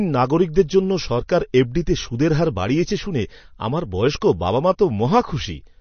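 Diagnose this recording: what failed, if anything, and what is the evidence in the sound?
MP3 compression runs through the whole speech clip, a codec-stage fault. Nothing survives above 6.4 kHz, and the damage is plainly audible as a watery, swirly texture. The likely cause is an encoder starved of bits, consistent with about 32 kbps, cutting treble and switching weak frequency lines between frames.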